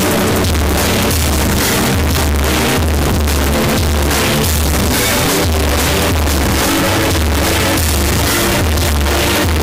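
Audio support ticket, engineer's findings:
Entire clip: extremely loud, harsh, near-square waveform sitting at an almost fixed, high level regardless of source level; background noise as loud as foreground content; underlying pitch still traceable. Likely float read as integer: 32-bit float samples interpreted as 32-bit integer, so sign and exponent bits set amplitude. Component: decoder or format negotiation. Fix: match sample-format flag to written data.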